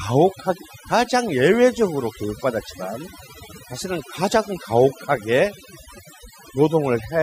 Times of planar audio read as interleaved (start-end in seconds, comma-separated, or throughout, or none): none